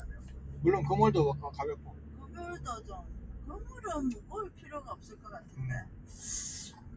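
From the start, levels pump and flutter, with held sounds and tails thinning by roughly 15 dB. A noise suppressor made for speech, applied to these sounds, is treating steady content as noise. Sound cut by the noise suppressor then sinks sustained parts by about 6 dB at 0.18–0.47 s and 1.76–2.38 s, and by about 5 dB at 4.50–4.66 s, 4.96–5.18 s and 5.41–5.57 s, while sharp onsets pass.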